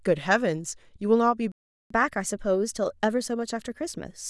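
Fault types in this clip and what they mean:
Playback stall: The speech stops dead at 1.52 s and the output stays silent until 1.90 s, a gap of about 390 ms. It does not fade or soften. It simply cuts out mid-flow and then resumes. The likely cause is the player running short of buffered data, or its playback thread being held up, so nothing reached the output for that stretch.
Catch-up at higher speed: From 1.90 s right to the end of the clip, the speech runs fast, at 1.1 times normal speed. Because the player resamples to do this, pitch rises along with tempo, by about a semitone and a half. The result is a slightly hurried, higher-pitched quality after the gap. The player is working through its backlog quicker than real time to win back the time lost in the stall.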